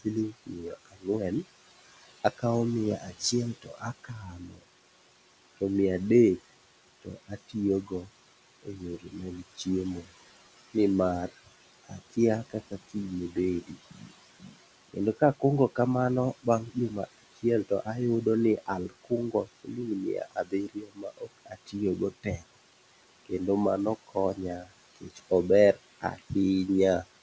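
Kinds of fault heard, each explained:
Noise suppressor artifacts: the suppressor turns down, frame by frame, whatever frequency bands it judges to be steady noise, here by about 18 dB. The room noise, about 13 dB below the speech, drops away in pauses and swells back under speech.
Speech cut by the noise suppressor: the suppressor mistakes quieter parts of the speech for noise and pulls them down with the background, by up to about 22 dB. This recurs in seven stretches from 0.0 to 26.3 s, worst between 16.4 and 22.6 s, leaving consonants and word endings faint or swallowed.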